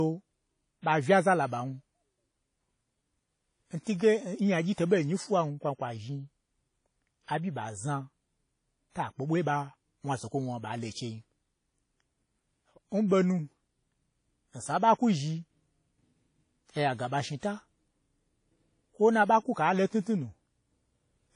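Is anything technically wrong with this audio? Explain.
Yes. Throughout the speech there is plainly audible damage, likely from WMA compression. Nothing is present above 10.1 kHz, which fits a low bitrate around 32 kbps. Coarse quantisation in long transform blocks smears noise around each syllable and drops weak components, leaving a ringing, washy sound with hiss that swells and fades with the signal.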